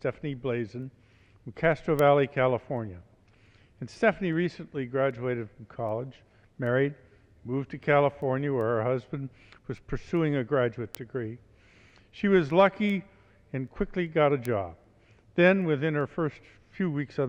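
Steady ticks about every 0.4 s, 0.44 to 17.18 s: word clock ticks, from an unlocked receiver clock around 50 ppm off, slipping one sample each time.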